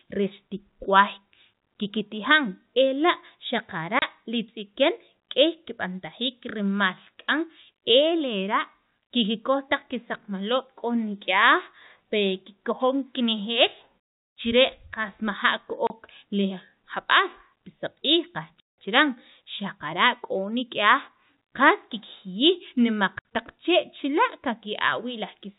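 It's a speech recording over a telephone-band G.711 link, and it has packet loss filled with silence: dropouts at 3.99 s, 15.87 s (just before "li jab'aal pi saq'iij"), 18.6 s (after that phrase, about 180 ms long), and 23.19 s. The gaps run 30, 30, 180 and 60 ms, which fits 30 ms packets going missing. Each hole is hard-edged.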